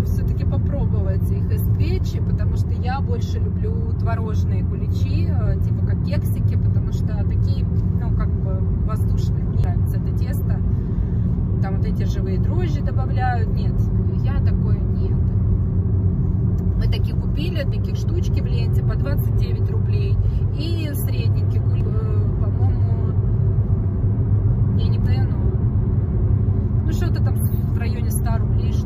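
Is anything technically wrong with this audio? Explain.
Yes. Damaged data in a compressed stream shows up four times, at 9.64, 17.72, 21.81 and 25.06 s. At each point the decoder meets corrupted or missing bytes it cannot parse, drops sync and skips forward to the next valid frame header before playback resumes. Each one is heard as a brief chirp or blip in the sound, an instant of garbled output where the bad frame would have been.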